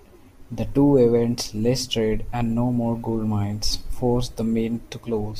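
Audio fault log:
3.44 s, dropped samples: a single sharp click in the speech, visible as a thin vertical line across the spectrum. The likely cause is a few samples, roughly a tenth of a millisecond, going missing, so the waveform jumps abruptly to a later value without any audible gap.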